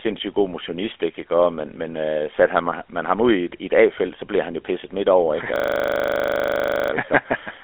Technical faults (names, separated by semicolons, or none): system hang loop